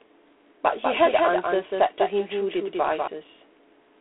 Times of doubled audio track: 0.84-3.08

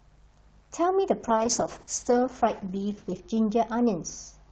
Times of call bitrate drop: 1.29-4.51

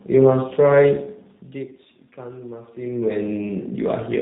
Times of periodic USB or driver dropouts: none

